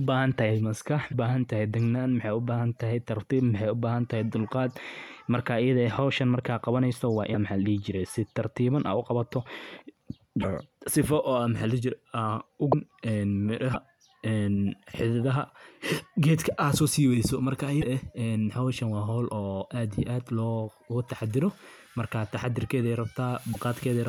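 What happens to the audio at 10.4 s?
From 10.41 to 10.44 s the speech jumps forward and a brief garbled glitch, about 30 ms long, sits at the join. The likely cause is a broken MP3 bit reservoir. MP3 frames, here about 26.1 ms each, can store part of their data in space left over in earlier frames. When frames go missing, the frame after the gap looks back for its borrowed bytes and decodes leftovers from an unrelated frame instead, producing that corrupted instant.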